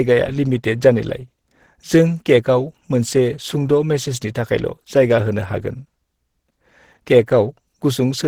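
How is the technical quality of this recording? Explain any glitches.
The recording has plainly audible low-bitrate compression damage throughout.

Opus compression runs from start to finish and likely explains the sound: the speech comes across muffled and hoarse, with grainy, rough texture. It fits a rate around 16 kbps, where the encoder's hybrid speech mode and band-filling leave this coarse sound, even though the bandwidth stays full.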